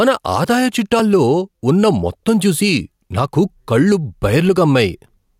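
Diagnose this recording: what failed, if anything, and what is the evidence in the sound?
Gain pumping runs through the whole speech clip: the gain ducks by around 5 dB under every loud syllable. The likely cause is excessive input gain driving a fast limiter in the processing stage. Unlike a noise gate, the limiter turns the level down rather than cutting it off.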